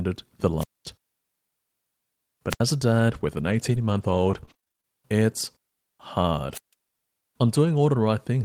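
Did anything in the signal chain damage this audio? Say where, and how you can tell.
Yes. Three wireless microphone squelch dropouts on the radio link: hiss swells, then near silence for about 0.22 s at 0.58–0.86 s, 75 ms at 2.50–2.60 s and 151 ms at 6.53–6.73 s. The FM signal faded until the receiver's squelch muted it.

Over 3.13–4.85 s there's repeated packet loss on the network, giving a choppy, robotic stretch. It has nine short holes, the longest about 29 ms. Roughly 176 ms was patched by extending the last sound, and about 180 ms is simply missing.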